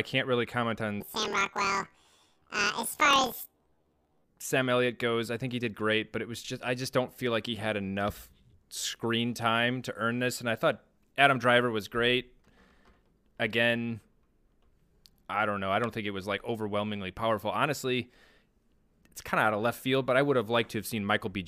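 Speech clip: right after "can't really comment on", from 1.00 to 4.27 s, planar audio read as interleaved shifts it up an octave with a 38.3 Hz buzz from 26.12 ms blocks, showing as doubled harmonics and vertical striping.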